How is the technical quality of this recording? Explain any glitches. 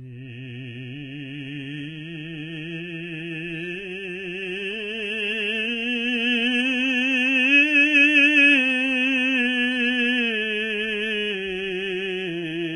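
Technical quality is poor, with heavy compression damage throughout the music. The likely cause is HE-AAC compression at a very low rate, consistent with about 16 kbps. The treble above the crossover is rebuilt from copied lower bands rather than coded, so cymbals sound gritty and metallic, and nothing remains above 11.2 kHz. Unlike a plain low-pass, the top still sounds bright, just falsely so.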